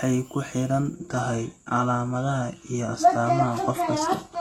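Right after "ku xidhan" at 0.94 s, the adaptive stream drops to a lower bitrate: the top end above 12.3 kHz vanishes without a gap, sounding like a low-bitrate HE-AAC fallback.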